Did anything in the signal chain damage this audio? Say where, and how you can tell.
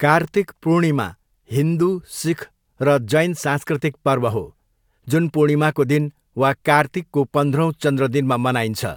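No, nothing along the chain damaged this speech recording, so there is no stage to point to and no time to mark.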